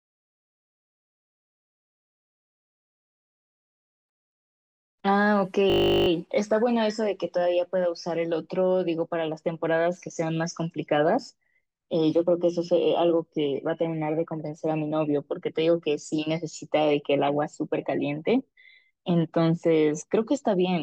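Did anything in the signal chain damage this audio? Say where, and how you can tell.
Yes. A system hang loop at the driver or buffer stage: from 5.7 to 6.08 s the driver stalled while the hardware kept replaying one 20 ms ring buffer, 19 times over. That exact repetition at 50 Hz turns the speech into a steady buzz, with essentially nothing skipped afterwards.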